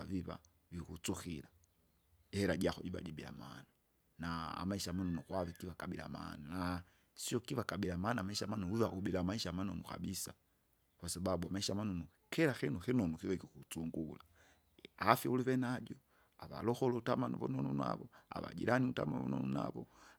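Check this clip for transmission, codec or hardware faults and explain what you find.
Nothing here needs fixing: the speech runs along steadily with no dropouts, glitches or hardware trouble anywhere in it.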